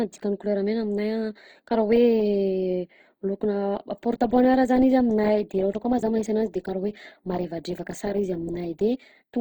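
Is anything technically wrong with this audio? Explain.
Yes. Throughout the speech the sound is rough and grainy, with tones turning noisy rather than clean. This is likely Opus compression in its music (CELT) mode, which fits a starved rate near 24 kbps. It preserves each band's energy but fills bands it cannot afford with folded or noise-like content, so the texture turns gritty. Unlike MP3, there is less watery swirl from spectral holes, and the bandwidth stays full, reaching about 20.2 kHz.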